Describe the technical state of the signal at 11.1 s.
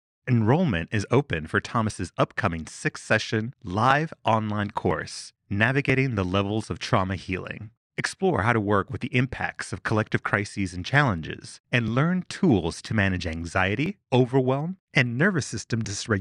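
At 11.1 s the speech falls within a string of evenly spaced ticks that recur about every 1.0 s from 0.91 s to 15.85 s, some fifteen in all, each audible only where there is signal. These are periodic USB or driver dropouts: at a fixed interval something stalls the USB bus or audio driver, and a few milliseconds of audio are skipped outright rather than filled, leaving a splice click each time.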